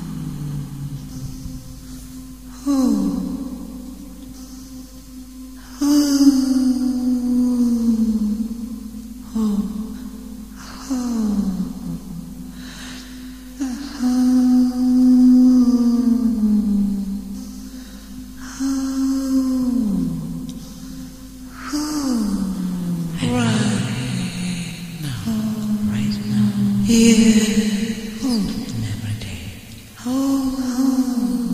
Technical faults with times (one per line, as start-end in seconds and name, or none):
none